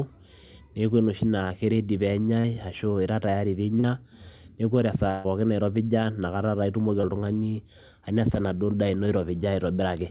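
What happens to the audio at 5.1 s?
The sound briefly freezes into a held, fading smear from 5.10 to 5.29 s: a burst of packet loss, concealed by stretching the last audio over about 140 ms of missing speech.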